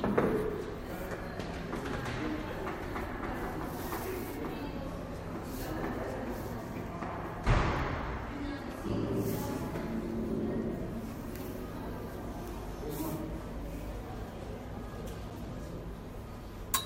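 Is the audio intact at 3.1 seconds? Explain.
Yes, the sound plays through cleanly at 3.1 seconds, with no fault at that moment.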